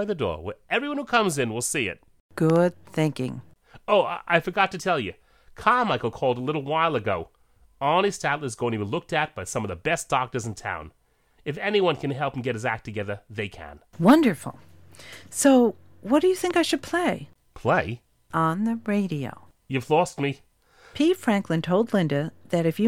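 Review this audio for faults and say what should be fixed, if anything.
Two loud pop events stand out in this speech. The first, from 2.50 to 2.58 s just after "see it", is a pair of pops in quick succession; the second, from 16.51 to 16.53 s between "what do you" and "I should play", is a single one. Each peaks at around 10 dB above the speech and sounds like the likely result of a sudden voltage step, such as a plug, a switch or a static discharge, being shaped into a thump by the circuits after it. Unlike a dropout or a digital click from a buffer error, the speech carries on unbroken underneath, with no gap or stutter. To prevent it, secure cables and connectors, and avoid switching or touching equipment while recording.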